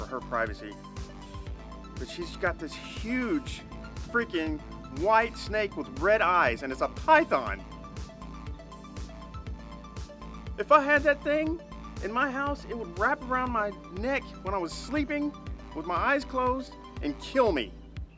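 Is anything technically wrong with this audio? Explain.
No, nothing technically wrong stood out on listening to this audio.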